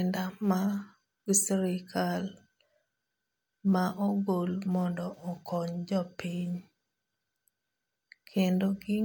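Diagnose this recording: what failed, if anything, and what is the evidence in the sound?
Nothing in the signal chain gives way anywhere in the recording, with the speech level, continuity and timing holding steady throughout.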